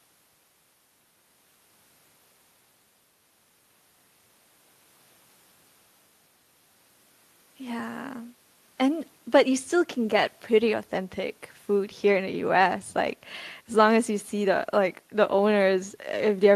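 No technical faults are audible.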